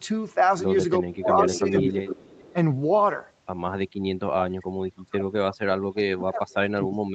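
A speech recording in which the voice repeatedly dips or drops out in pieces, at 0.99–1.28, 1.45–1.97, 2.53–2.57, 4.12–4.70, 4.91–5.45 and from 5.92 s to the end, sinking by as much as about 40 dB at its deepest. This is speech suppressed in double talk, most likely an echo canceller muting the near talker while the far side spoke at the same time. From 1.38 to 2.52 s a fainter copy of the voice trails it by about 440 ms, sitting roughly 10 dB below the direct speech. That is likely an echo leak: loudspeaker sound that got past the far end's echo cancellation and came back down the line.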